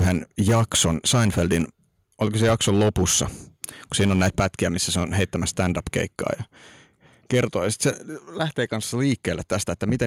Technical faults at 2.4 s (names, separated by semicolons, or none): microphone overload